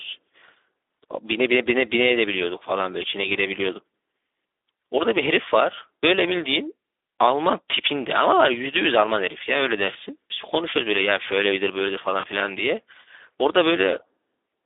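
From the start, the speech carries Speex codec damage: a hoarse, noisy texture from a starved CELP excitation, consistent with a bitrate around 11 kbps. The passband runs from about 250 Hz to 3.6 kHz, giving a narrow telephone-like tone with nothing above that limit.

From 12.19 to 12.26 s, VoIP packet loss concealed by the speech codec appears. About 40 ms of audio is missing, which fits two lost 20 ms frames. The decoder stretches its last pitch and filter into a fading buzzy tone or coloured noise, and the speech stays weak or distorted briefly after the packets resume.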